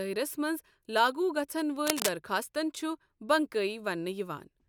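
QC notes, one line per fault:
1.86 to 2.09 s, cable scratch noise: a brief patch of dense, uneven scratching and rustling sits over the speech for about a quarter of a second, roughly as loud as the speech itself, likely from a worn cable or connector being moved and its contact resistance jumping rapidly.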